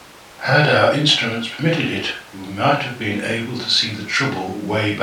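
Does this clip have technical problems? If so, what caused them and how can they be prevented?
No, there are no technical problems to report here.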